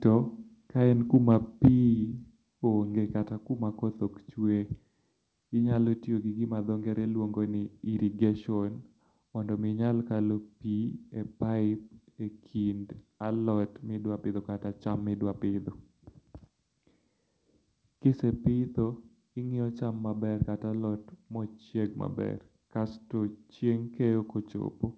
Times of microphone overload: 1.14-1.35, 1.64-1.68

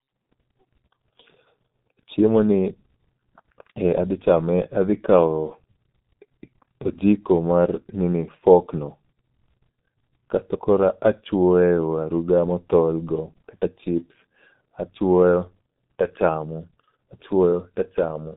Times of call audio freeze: none

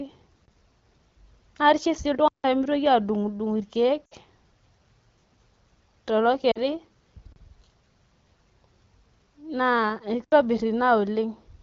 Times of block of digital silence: 0.45-0.48, 2.28-2.44, 7.32-7.36, 10.24-10.32

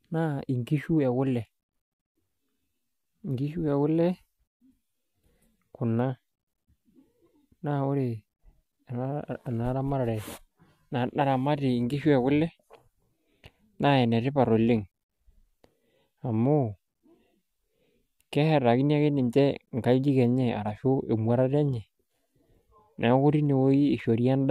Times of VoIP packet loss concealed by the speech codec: none

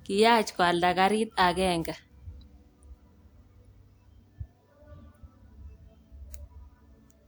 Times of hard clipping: none

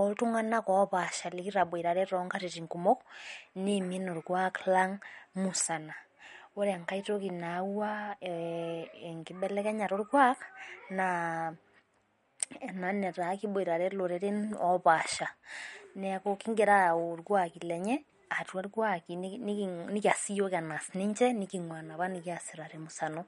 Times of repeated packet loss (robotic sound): none

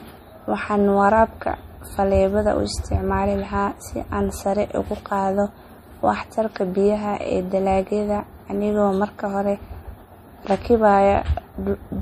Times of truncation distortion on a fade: none

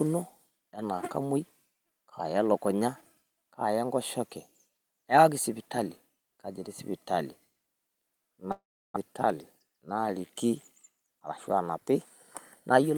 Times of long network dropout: 8.51-8.98

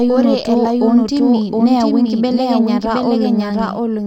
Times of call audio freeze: none

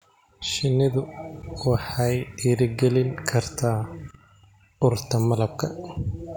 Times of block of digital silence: 3.17

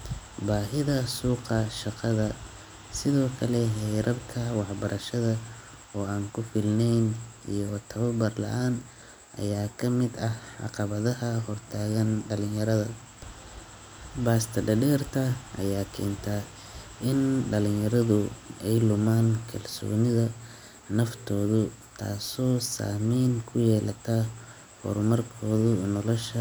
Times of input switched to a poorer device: none

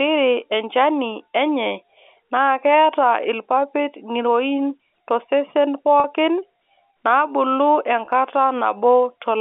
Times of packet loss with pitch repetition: 6.00-6.04, 8.06-8.08

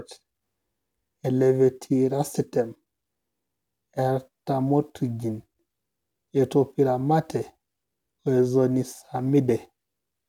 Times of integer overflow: none

